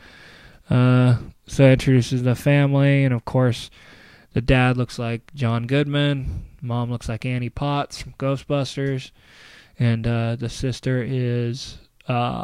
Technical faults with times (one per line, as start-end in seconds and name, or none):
none